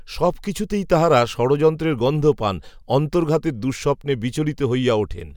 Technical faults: none

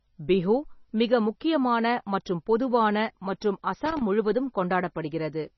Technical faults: MP3 compression; loose connector crackle

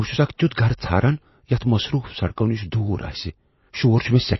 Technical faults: MP3 compression; pre-echo

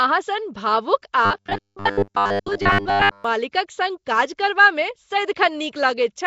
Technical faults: Nellymoser compression; robotic sound from repeated short buffers; pre-echo

